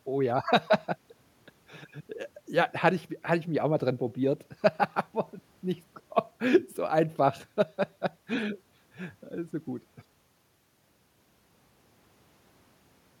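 Nothing technically wrong turns up anywhere in this short stretch of speech, so there are no faults to point to.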